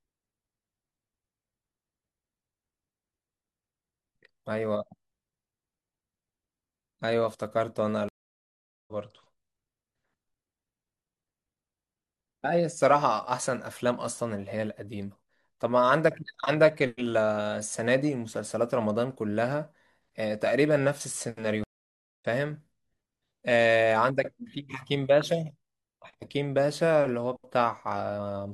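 Twice in this speech clip a stream reconnect breaks the connection and restarts the decoder mid-stream. From 8.09 to 8.92 s there is 0.79 s of silence, and speech resumes roughly a second further on. From 21.64 to 22.25 s, 0.57 s of silence skips roughly 0.3 s ahead.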